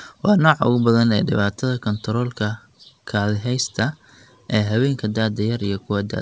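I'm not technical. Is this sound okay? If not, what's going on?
Yes, this recording sounds fine, with nothing wrong.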